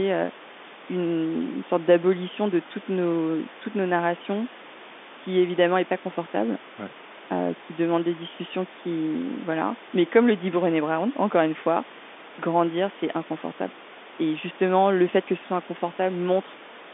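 Nothing in this speech recording stood out as a technical problem on listening.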